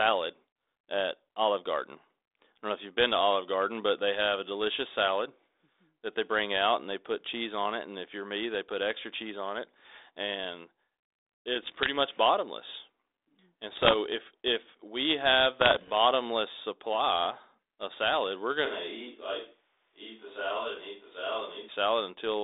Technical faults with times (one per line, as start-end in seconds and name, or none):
11.62-11.89 bit errors on an ADPCM link
13.73-13.94 bit errors on an ADPCM link
15.60-15.92 bit errors on an ADPCM link
18.66-21.69 switch to a distant microphone